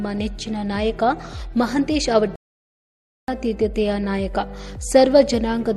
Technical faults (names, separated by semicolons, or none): playback stall